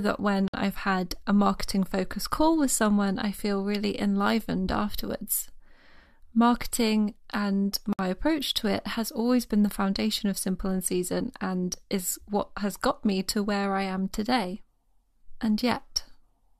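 At 0.48 s and again at 7.93 s the speech drops into silence for about 56 and 60 ms, a gap at a join of encoded pieces. Separately encoded segments were joined with their encoder delay and end padding left in. Unlike a dropout, nothing is lost, because the sound resumes exactly where it stopped.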